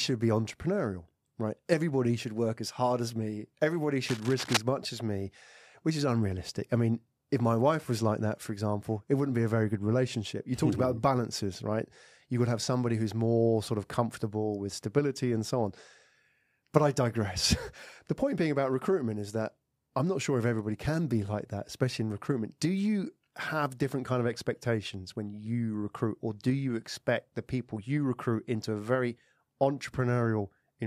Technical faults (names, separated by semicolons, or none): cable scratch noise